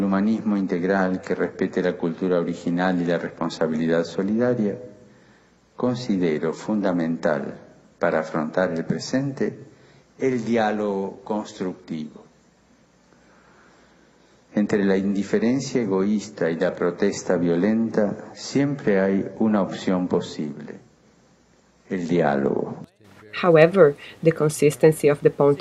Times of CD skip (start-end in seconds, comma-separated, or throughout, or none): none